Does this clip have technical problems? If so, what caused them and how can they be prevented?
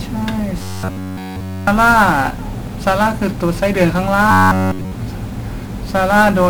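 Yes. The speech passes through 1-bit DFPWM compression, where each sample is one bit nudging an adaptive level up or down, consistent with a 48 kbps stream. The coarse steps bury everything in heavy fuzz, crackle and hiss that masks the treble. Prevent it by using a multi-bit codec or a higher-fidelity format.

From 0.62 to 1.67 s and from 4.31 to 4.92 s, there is robotic sound from repeated short buffers. Fresh audio likely stopped arriving, so playback looped roughly 10.7 ms chunks in place of nearly all the real audio, imposing a rigid 93.8 Hz metallic buzz. Prevent it with larger jitter buffers and reliable audio delivery.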